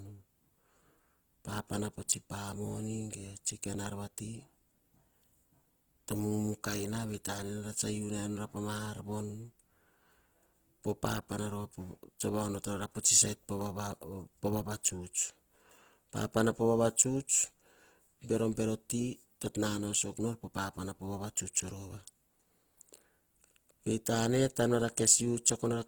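Throughout, the speech shows plainly audible Opus compression, likely from its CELT mode at a rate that fits about 16 kbps. Bands short of bits are refilled with folded or noise content, making tones grainy and rough, while the spectrum still extends to 20.2 kHz.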